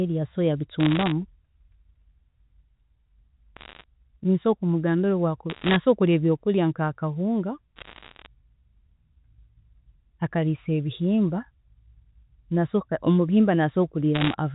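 Bit errors on a digital phone line crackle through the speech in five short bursts, at 0.8–1.12 s, 3.56–3.84 s, 5.5–5.76 s just after "kumugambira obu akuba", 7.76–8.26 s, and 14.15–14.34 s. Flipped bits in the mu-law G.711 stream corrupt single samples, and hits on sign or high bits throw sharp ticks over unchanged speech. Roughly one bit in a hundred is wrong. On a waveform they appear as isolated needle spikes. A spectrogram shows thin vertical lines spanning the whole band up to the 4 kHz telephone limit.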